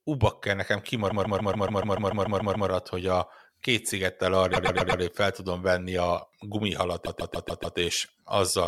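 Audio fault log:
1.09–2.68 s, 4.53–5.01 s, 7.05–7.77 s: repeated frames. A 144 ms block replays 11 extra times, a 120 ms block 4 times, then a 144 ms block 5 times, stuttering. The block lengths fit runs of five or six compressed frames, and together they lengthen the speech by 2.78 s.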